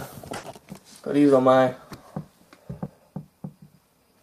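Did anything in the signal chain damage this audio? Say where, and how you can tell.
Yes. There are two kinds of damage, one on the network and one at the capture buffer.

Burst of packet loss, network stage: from 0.37 to 0.46 s the sound stops progressing and the receiver's concealment takes over. It extends the last received sound for about 60 ms while lowering its level, so what is heard there is a held continuation that fades rather than new material. When real audio resumes, about 60 ms of the original has been skipped. That pattern fits lost or late packets in transit.

Dropped buffer (overrun), driver or buffer stage: at 0.70 s and again at 2.86 s the sound jumps forward abruptly with no gap of silence. Around 40 ms is missing at each point, and the audio on either side is spliced directly together. Each is most likely a capture overrun: the application failed to read a buffer in time, the hardware overwrote it, and that stretch of audio was lost without any filler.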